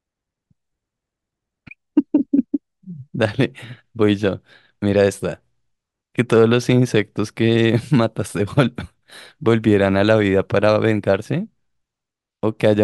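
No technical faults can be heard anywhere in the recording; the speech signal stays intact and continuous from its opening moment to its close.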